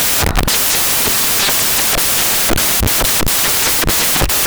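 Loud white noise runs through the whole recording. These are samples built from the wrong bytes: each value was assembled misaligned or byte-swapped, so the rapidly changing low-order bits now dominate as noise.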